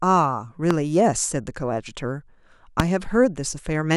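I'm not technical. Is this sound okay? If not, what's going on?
No, there are two loud pops, sharp thumps at 0.71 to 0.73 s and at a louder 2.80 to 2.82 s, over continuing speech. Likely a plug, switch or static spark.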